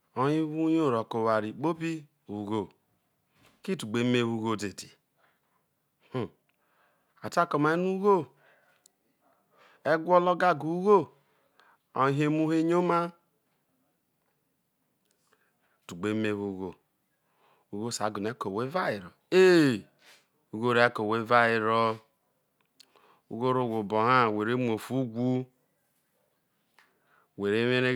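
Listening closely to the speech in this recording, nothing stood out as a technical fault at any point.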